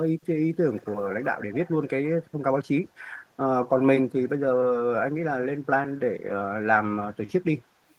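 A loudspeaker on the far end, with an echo canceller that likely failed to remove all of what its microphone picked up, is sending part of this speech clip back as echo leak. From 0.75 to 1.02 s and again from 1.23 to 1.71 s, a faint delayed copy of the speech trails the original by 178 ms, sitting roughly 20 dB below it in the first stretch and somewhat quieter, around 25 dB down, in the second.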